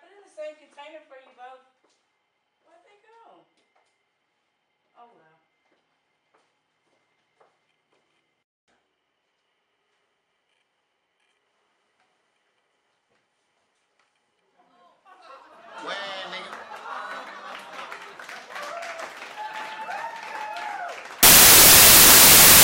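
Samples built from the wrong bytes appear from 21.23 s to the end at 22.63 s. The reader is assembling each sample's bytes out of order or misaligned, so the rapidly changing low bits dominate, producing loud, harsh broadband noise, close to white on louder passages.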